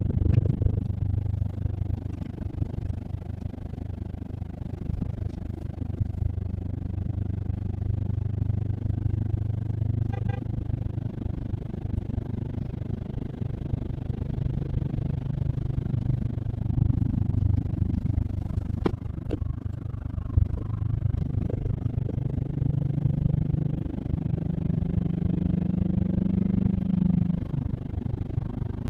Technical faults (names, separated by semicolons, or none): overlap-add ripple